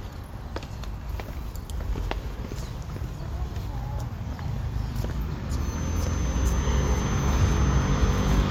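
From 5.53 s to the end there's a feedback whistle, a thin steady 6.2 kHz tone well below the sound, likely a speaker-to-mic loop hovering at the edge of feedback.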